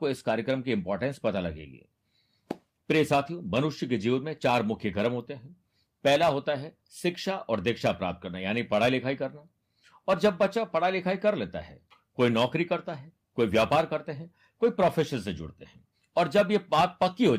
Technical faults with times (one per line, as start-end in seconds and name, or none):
none